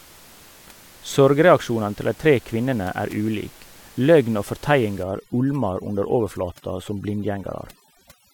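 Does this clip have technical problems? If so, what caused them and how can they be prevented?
Yes. From 5.03 s to the end at 8.33 s, overdone noise removal sets in. The background drops and breaks up into twinkling specks. Its quiet parts fall near the noise estimate and get cut along with room noise about 26 dB down. Use a gentler reduction setting and check by ear.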